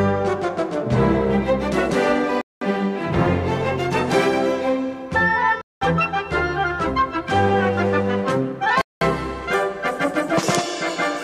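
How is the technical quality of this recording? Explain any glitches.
The recording is interrupted by three gaps between chunks: 2.41–2.61 s, 5.61–5.81 s and 8.81–9.01 s. Each 200 ms hole of silence falls after a 3-second chunk. The waveform drops to flat silence with hard edges, and the spectrogram shows blank vertical stripes.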